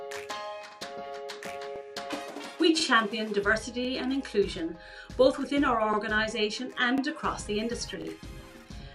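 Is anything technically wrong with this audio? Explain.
Yes, there are overlapping chunks. Joins land at 0.71, 1.76, 2.80, 3.85, 4.89, 5.93, 6.98 and 8.02 s, where each 1.0 s chunk starts 44 ms before the previous one ended. That replays a brief slice, giving a regular stutter about once per second.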